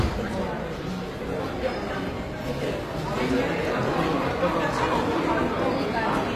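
From start to finish the treble sounds gritty and metallic, with nothing above about 14.9 kHz. This is likely HE-AAC compression, which fits roughly 24 kbps. The top band is rebuilt from copied lower bands, so its detail never matches the original.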